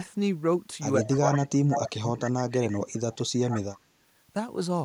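Speech suppressed in double talk runs from 1.04 to 2.81 s. The voice dips by up to about 25 dB, for roughly a second in total, most likely because an echo canceller, facing both sides talking at once, attenuated everything. Echo leak overlaps it at 1.07–1.39, 1.7–1.9 and 2.24–2.3 s: a copy of the voice returns 145 ms late, about 10, 5 and 15 dB below it, likely residue the far end's canceller failed to remove. A much fainter leak, about 35 dB down, follows at 2.93–3.18 s. Suppression returns at 3.31–3.88 s, dropping the voice up to about 20 dB over roughly 0.3 s, while another 145 ms echo leaks through at 3.49–3.61 s, about 10 dB down.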